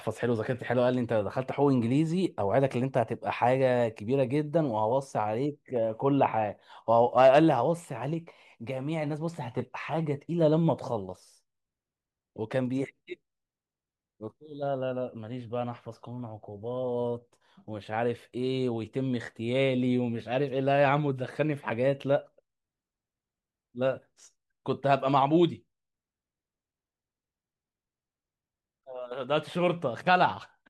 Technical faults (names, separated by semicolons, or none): none